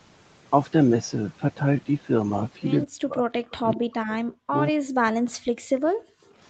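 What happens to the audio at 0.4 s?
At 0.4 s the speech passes through intact, carried only by the normal call microphone processing, which trims the lowest bass and leaves nothing above 8 kHz.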